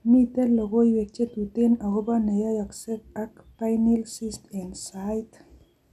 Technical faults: MP2 compression

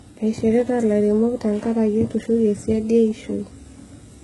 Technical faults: HE-AAC compression

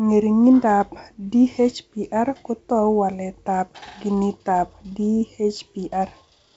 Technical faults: none

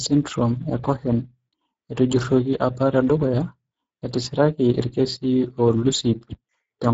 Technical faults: Speex codec

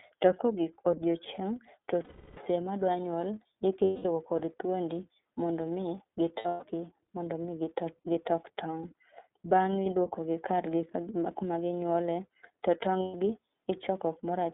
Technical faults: iLBC codec; lost iLBC frames

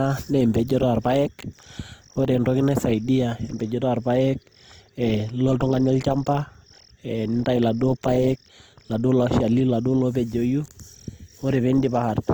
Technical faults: Opus compression

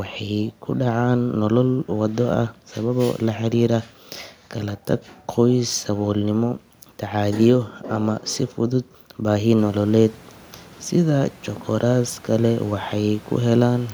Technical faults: none

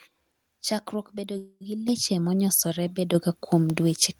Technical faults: call audio freeze; microphone volume stepped up

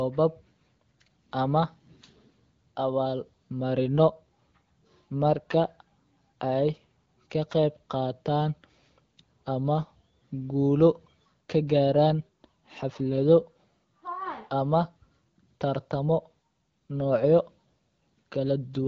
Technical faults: none

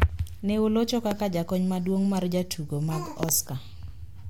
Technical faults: loud pop

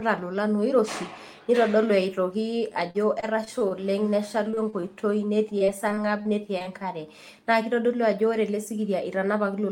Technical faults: repeated packet loss (robotic sound)

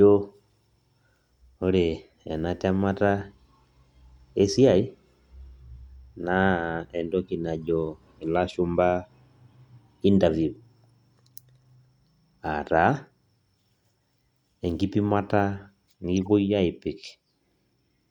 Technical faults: corrupt frame decoded

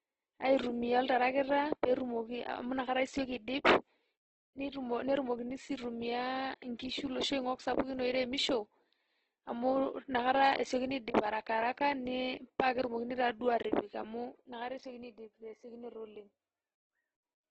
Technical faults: Opus compression

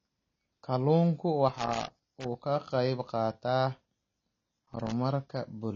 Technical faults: AAC compression; loose connector crackle

